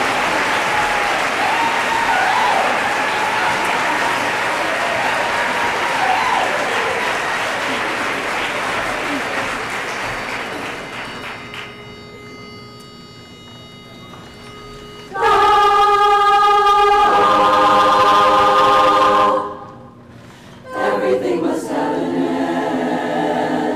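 No technical faults can be heard anywhere in the recording, and the signal holds steady throughout.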